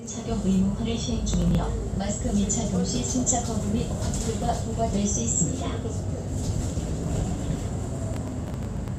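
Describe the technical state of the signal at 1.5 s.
At 1.5 s the signal is inside a processor overload crackle (1.34–1.55 s): roughly five missed short buffers are skipped, so it tears grittily, showing hard-edged waveform gaps and thin broadband spectrogram streaks.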